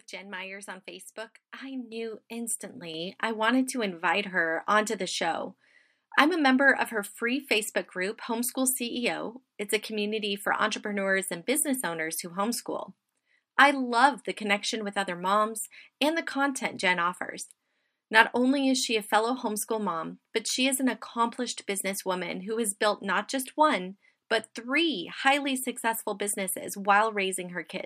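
At 1.92 s the microphone volume steps up by about 8 dB, then at 2.94 s it jumps again by about 4 dB, right before "I wanted to invite". Each time the call software seems to have decided the mic was too quiet and bumped the device's input gain in one go, so the voice and the room behind it get louder together, instantly, with no fade. You hear it as two abrupt level lifts in quick succession.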